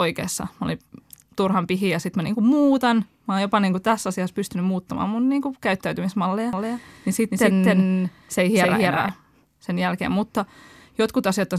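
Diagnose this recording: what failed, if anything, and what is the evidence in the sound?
Doubled audio track, 6.53 to 9.09 s: a roughly equally loud copy trails about 300 ms behind, likely from a slower second capture path or an out-of-step edit.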